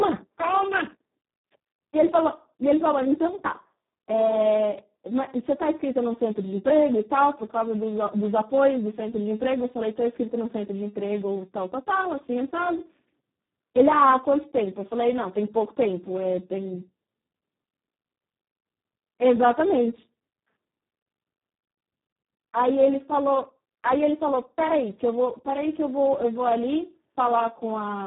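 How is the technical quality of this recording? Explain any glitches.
Technical quality is poor: the whole recording carries heavy Speex codec damage from start to finish. Speex is a CELP speech coder that models the voice as a filter driven by an excitation signal, and the severe coarseness here fits a bitrate of around 4 kbps, leaving almost nothing for that excitation. The speech comes out hoarse, noisy and near-robotic, with nothing above 3.8 kHz. Unlike a simple low-pass, the remaining band itself sounds synthetic.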